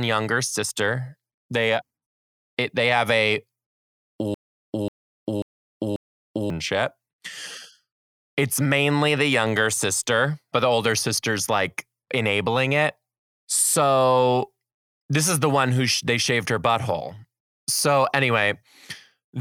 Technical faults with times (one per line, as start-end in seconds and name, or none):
4.34-6.50 broken-record loop